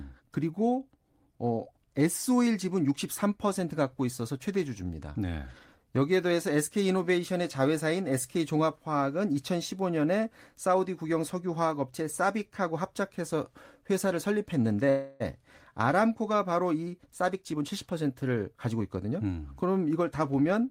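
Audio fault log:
14.89 to 15.22 s, call audio freeze: the last bit of sound gets stretched into a buzz or hiss that fades for about 307 ms, then the speech picks up right where it left off. Likely the jitter buffer ran dry while packets were held up, so nothing's lost, but everything after sits about 307 ms later.
16.99 to 19.40 s, jitter buffer speed-up: the speech runs at about 113% speed with the pitch unchanged, so it sounds hurried. The buffer was holding more audio than it wanted, so the receiver kept snipping out short pitch-period chunks, around 300 ms in total, to pull the delay back down.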